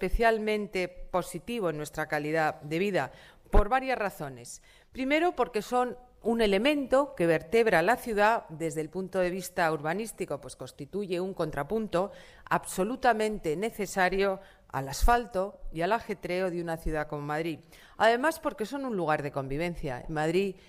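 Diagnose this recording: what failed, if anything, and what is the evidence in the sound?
Nothing in the signal chain has failed: the audio holds steady levels and continuous timing throughout, with no breaks, distortion or added noise to point to any stage of the path.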